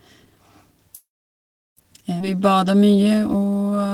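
A call audio freeze runs from 0.95 to 1.79 s. The sound stops, and the last fragment trails briefly before falling silent for about 0.72 s. The stall is likely due to packets held up in transit, which emptied the jitter buffer. When the audio resumes it carries on from where it stopped, so the wait added roughly 0.8 s of delay and nothing is lost.

A skip ahead follows at 2.19 to 2.22 s. Playback jumps forward with only a tiny join, and around 0.4 s of audio is gone. With later audio already queued, a stretch was dropped, and the two sides are spliced almost directly.

A jitter buffer slow-down runs from 2.31 s to the end. Sounds are drawn out at 86% speed with the pitch unchanged, adding 239 ms. The buffer rebuilt its reserve by repeating single pitch periods and bits of pauses.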